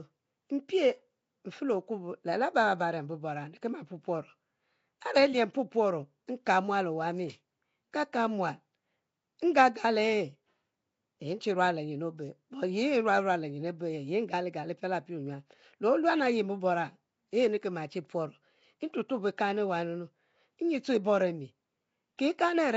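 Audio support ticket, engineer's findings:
Rough, hissy halo around the speech for the whole clip, smeared and underwater, nothing above 7.7 kHz. Likely Nellymoser compression: 256-sample blocks at two bits per sample, weak bands zeroed and noise-filled. Damage plainly audible, consistent with a 32 kbps stream.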